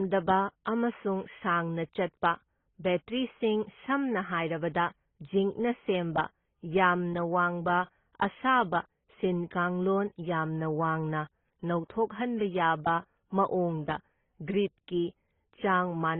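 Throughout the speech, nothing sounds above 3.8 kHz, and two distinct kinds of smearing and swirl overlap. The likely cause is transcoding between lossy codecs: a low-rate AAC-LC encode was re-encoded as Opus, which kept that lower cut-off and added its own artefacts.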